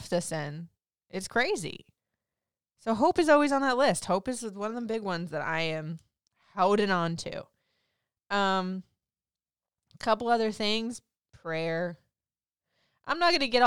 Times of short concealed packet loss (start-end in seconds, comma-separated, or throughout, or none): none